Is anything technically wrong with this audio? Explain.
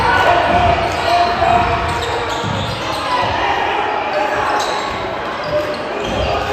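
No, nothing is technically wrong with this audio.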